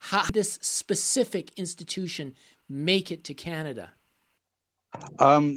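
At 0.29 to 0.31 s the speech makes a skip ahead: a stretch of roughly four tenths of a second never reaches the ear, and nothing is inserted to cover it. That audio was dropped while later material was already queued, so playback jumps straight from one side of the missing piece to the other. The join is abrupt, with no silence, and the sentence seems to lose part of itself mid-flow.

From 0.59 to 2.79 s a jitter buffer speed-up follows, ending just before "it to". The buffer was holding more audio than its target, so the receiver repeatedly trimmed short pitch-period-sized pieces to drain it, about a tenth of a second in total. Speech runs at 105 % speed with pitch unchanged, which sounds slightly hurried and clipped in rhythm rather than higher.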